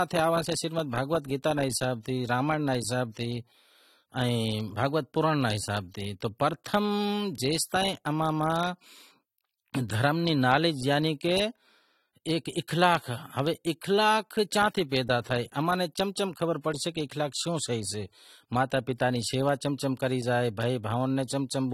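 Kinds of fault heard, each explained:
AAC compression: The speech sounds dull and smeared throughout, with plainly audible coding damage. This is likely low-bitrate AAC-LC, fitting roughly 32 kbps.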